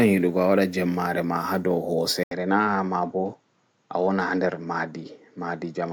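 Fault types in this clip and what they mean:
Input switched to a poorer device: At 2.23 s the speech drops out for about 80 ms. It returns through a narrower channel with nothing above 7.8 kHz. From there to the end it sounds duller and less airy. A faint new background noise sits well below the speech. The loudness stays about the same, so only the tone and noise change. The likely cause is the recording input switching mid-take to a lower-bandwidth microphone or headset.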